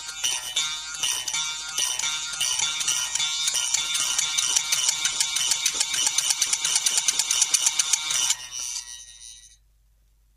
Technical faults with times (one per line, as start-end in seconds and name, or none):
none